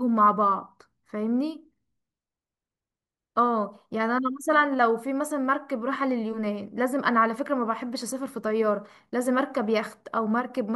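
No technical faults occur at any point in the speech, so there is nothing to describe in time order.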